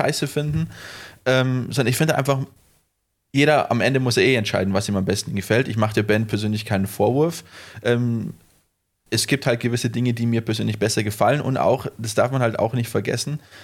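No audible technical faults present.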